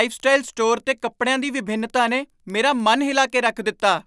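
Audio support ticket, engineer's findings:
Regular ticks at 10 per second, present whenever speech is present, for the whole clip. Probable component: sample-rate converter (48 kHz to 24 kHz) reset on every 100 ms block. Resampler restarted on every block: each block is filtered without its neighbours, leaving a small error at every edge. Spectrogram: faint vertical broadband lines every 100 ms, visible only under speech. Waveform: tiny discontinuities at the same spacing.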